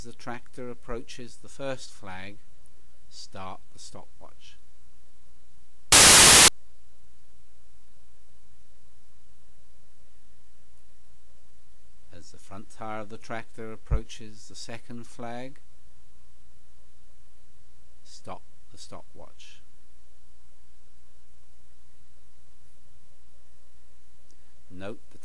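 File tags played as audio: from 5.92 to 6.48 s an embedded cover picture's compressed data is read as samples, giving a very loud burst of white-noise static with hard edges.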